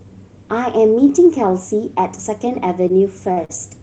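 Speech clip with three short stalls from a late packet: each time, audio due from the network arrived late, the jitter buffer ran dry, and the receiver held the last sound until it came, adding no gap in content but pushing playback later. The holds fall at 2.88–2.92 s, about 18 ms; 3.32–3.39 s, about 50 ms; and 3.45–3.51 s, about 45 ms. Each drags a syllable out unnaturally with a faint buzzy or dipping quality, the last two bunched closely together.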